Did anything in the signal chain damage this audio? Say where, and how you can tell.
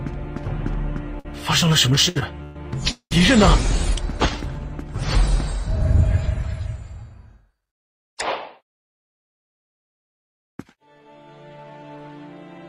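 Yes. The damage happens at the network stage, where the receiver's jitter buffer is left short of packets and then later overfilled.

A short stall from a late packet occurs at 1.19 to 1.27 s. The sound is held for about 54 ms and then resumes from exactly where it stopped. A packet arrived late, the jitter buffer ran dry, and the receiver stretched the last fragment to cover the wait. Nothing is missing, which separates this from a dropout or lost-packet gap. It is a single frozen moment, not a series.

Repeated stalls (stutter) run from 1.95 to 3.13 s. The sound hangs five times, and the longest hold lasts about 195 ms. Roughly a third of that stretch is filler, so the audio drags. The cause is that packets kept arriving late or more slowly than playback consumed them, which emptied the buffer again and again. The repetition is what distinguishes this from the isolated stall earlier. 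The audio still resumes in place each time, with nothing skipped.

Jitter buffer speed-up happens twice: at 9.03 to 11.09 s the audio runs about 3% fast, and at 11.57 to 12.10 s about 16% fast. The two passages shed roughly 70 ms and 100 ms respectively. After a backlog, the receiver trimmed short pitch-period slices to reduce its delay. Pitch stays put while pace quickens, which tells it apart from a sample-rate mismatch, where speed and pitch would shift together.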